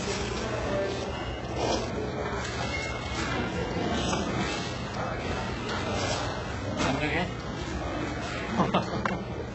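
Throughout, the treble is synthetic and metallic, with nothing above 8 kHz and heavy smearing, likely from HE-AAC compression at a very low bitrate, around 8 kbps, rebuilding the upper band by replication.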